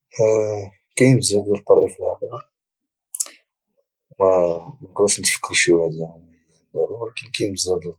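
At 0.45 s, just before "كاينين بزاف ديال", a single 20 ms lost packet rebuilt from error correction passes as a brief grainy, noisier smear rather than a dropout. The next packet's low-bitrate backup copy filled the hole, so there is no silence or repeated-buzz concealment. The same happens again from 1.81 to 1.83 s, right after "كاينين بزاف ديال".

From 2.14 to 3.61 s comes a section at the wrong speed. Playback runs 1.15 times fast, which raises the pitch by roughly two semitones and hurries the delivery. It likely comes from resampling to a mismatched clock. Tempo and pitch rise together, which separates it from a pure pitch shift.

At 5.35 to 5.37 s, just before "شي واحد", a third 20 ms rebuilt packet brings another short rough patch, again with no gap.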